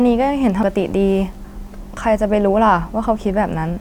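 At 0.63 s the speech is hit by damaged data in the compressed stream. Corrupted bytes make the decoder misread a frame and lose sync until it finds the next header, producing a brief blip. On a spectrogram this shows as a thin vertical smear, and the waveform has a short irregular glitch.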